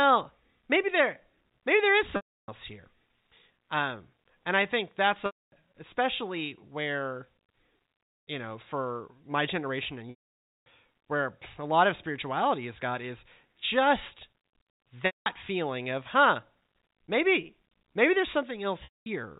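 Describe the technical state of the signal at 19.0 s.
At 19.0 s the signal sits inside a stretch of packet loss with pitch repetition, from 18.84 to 19.06 s, about 220 ms of lost audio. The receiver repeats the last pitch period, so a held, buzzy tone fades out over about 50 ms into silence before the sound cross-fades back in.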